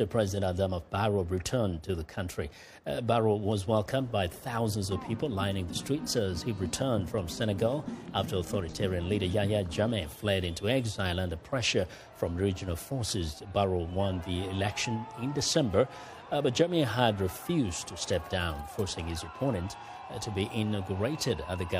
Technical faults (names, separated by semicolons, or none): none